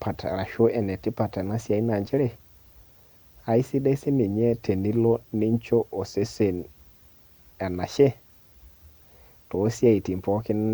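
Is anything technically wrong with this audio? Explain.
No, nothing technically wrong stands out in this speech recording; it all sounds just as it should.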